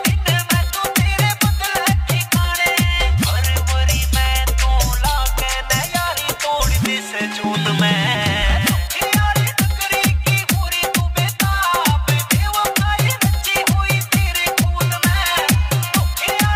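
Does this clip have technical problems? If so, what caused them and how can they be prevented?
Yes. Crude rate conversion runs throughout. Samples were repeated without filtering, consistent with a 44.1 kHz to 48 kHz change, producing an inharmonic, gritty fizz roughly 20 dB below the signal that tracks loud and bright passages. Prevent it by using a band-limited resampler.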